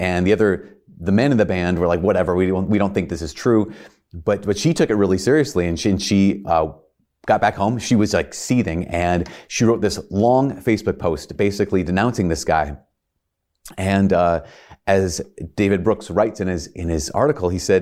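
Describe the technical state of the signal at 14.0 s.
At 14.0 s the speech signal is intact, with no dropout, clipping, glitch or other fault present.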